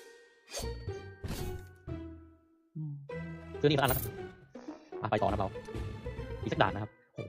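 From 3.23 s to the end, a time-stretched section plays at double speed with unchanged pitch, sounding rushed, likely from software dropping short pieces to shorten it.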